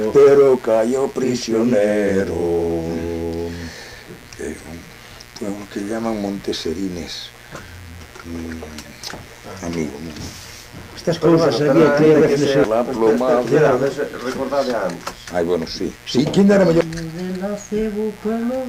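A mains buzz runs through the whole clip, from start to finish. It sits well below the sound, roughly 25 dB down. The fundamental is 60 Hz. Sharp switching spikes got into the signal path, twice in each mains cycle. A dimmer, a rectifier or a missing shield could let them in. Those spikes carry a dense stack of 60 Hz harmonics up to several kHz. The result is a steady, raspy buzz rather than a smooth hum.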